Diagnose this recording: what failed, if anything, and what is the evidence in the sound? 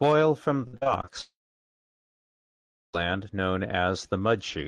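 Repeated packet loss (robotic sound), network stage: between 0.67 and 1.09 s, five short holes (longest 57 ms) are patched with repeated sound. The result is choppy, unlike a single clean cut.

From 1.21 to 2.95 s, a brief fading buzz gives way to about 1.6 s of silence. The likely cause is a long network dropout, since the audio resumes with that section missing.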